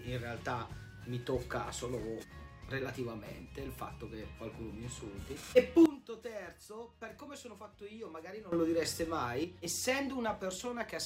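At 5.86 s a sudden gain jump drops everything by about 15 dB until 8.52 s, and at 9.44 s another cuts about 6 dB to the end. Background noise falls with the sound, instantly and unramped, unlike a fade or compressor, likely from an abruptly applied gain setting.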